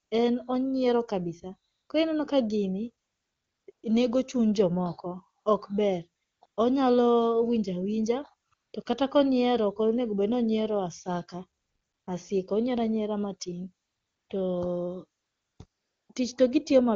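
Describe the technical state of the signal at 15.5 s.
At 15.5 s the signal is in a stretch of AMR comfort noise, from 15.19 to 15.59 s. The phone stopped sending speech frames for 400 ms, and the receiver substituted a smooth, steady synthetic hiss. Unlike a dropout, which goes dead silent, the gap is filled, but with noise that switches on and off abruptly instead of the real background.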